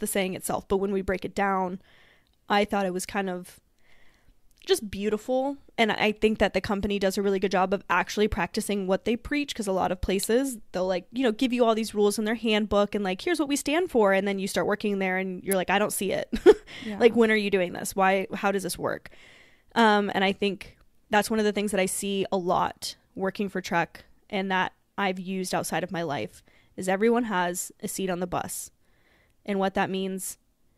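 A nearby switch, motor or static discharge likely arced briefly and coupled into the audio line, producing an electrical switching spike twice in this speech. At 10.23 s, after "because a lot of", a sharp snap peaking around -15 dBFS cuts across the sound. At 15.52 s, after "start working there and", a louder snap near -10 dBFS lands on top of the audio.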